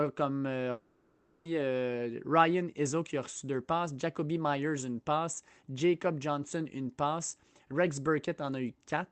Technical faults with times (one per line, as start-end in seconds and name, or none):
0.71-1.47 long network dropout